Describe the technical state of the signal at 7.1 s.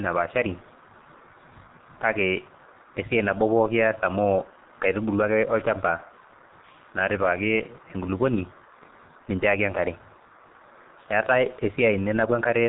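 At 7.1 s the speech carries G.723.1 codec damage, present throughout: coarse 30 ms frame coding fitting about 6 kbit/s leaves it muffled and hoarse, with a spectrogram blank above 3.9 kHz.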